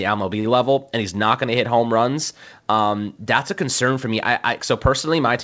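At 0.40 s, just before "level and he's not", there is a short stall from a late packet. It lasts until about 0.47 s. A packet arrived late and the jitter buffer ran dry. The receiver stretched the last sound to fill the gap, about 46 ms, then carried on from the same point. Nothing is lost. The held sound lingers with a faint buzzy smear, and everything after runs 46 ms later. The band stops at 8 kHz, which fits a G.722 call codec.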